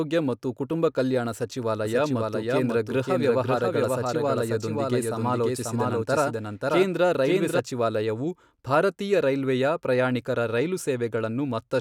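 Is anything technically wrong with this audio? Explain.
Yes. From 1.85 to 7.59 s there is a doubled audio track: a second full-band copy of the speech runs about half a second behind, at roughly equal level, with no decay. It starts and stops abruptly, likely from a slower second capture path mixed in.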